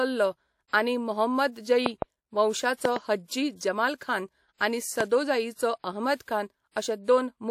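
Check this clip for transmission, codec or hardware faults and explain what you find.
Yes, there are faults: three loud pop events and two instances of pre-echo in this speech clip.

Loud pop: A voltage step or pulse, likely from a plug, switch, static discharge or driver glitch, entered the signal path. It struck as a double pop at 1.86 to 2.04 s and 2.85 to 2.98 s, then as a single pop at 5.0 to 5.03 s. The downstream circuitry shaped each pulse into a sharp pop standing about 20 dB above the speech the first time and about 15 dB the other two times, while the speech carries on underneath.

Pre-echo: The transform codec spread its quantisation noise evenly across blocks where a sharp attack fell late. Noise scaled for the loud onset therefore filled the quiet moment just before it, for 52 ms from 3.96 s and for 41 ms from 6.16 s. Each attack is preceded by a short hiss and sounds soft or smeared.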